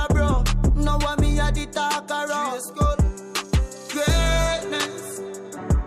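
No technical faults are audible.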